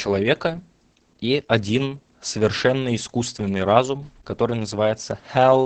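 Throughout, the speech goes through Opus voice compression, with its SILK linear-prediction coder starved of data, which fits a bitrate around 10 kbps. Nothing survives above 9 kHz, and the coarsely coded excitation leaves the speech heavily muffled, hoarse and slightly robotic.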